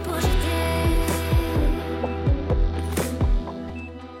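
Two brief glitches at 0.43 s and 3.70 s point to damaged data in a compressed stream. Each lasts only a few milliseconds and is heard as a short blip or chirp cutting into the audio. At those points the encoded bytes were corrupted or missing, so the decoder could not read the affected frame correctly, produced garbage output for that instant, and had to find the next valid frame header before resuming clean playback.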